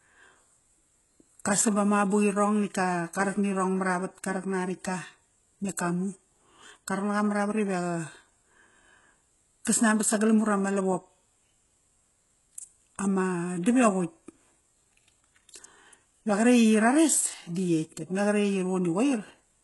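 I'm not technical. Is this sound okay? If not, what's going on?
No. Throughout, the speech's s sounds come out gritty and lispy, with nothing above 11.5 kHz. That's likely heavy HE-AAC compression faking the treble from lower sounds.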